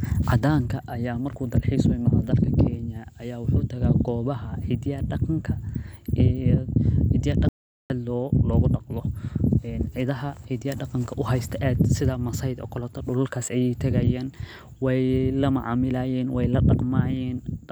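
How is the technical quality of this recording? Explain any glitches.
The recording has one clear glitch. At 7.49 to 7.90 s, an audio dropout to silence removes about 0.41 s of speech. Silence replaces even the room tone, which distinguishes it from a natural pause. The likely cause is a briefly lost input.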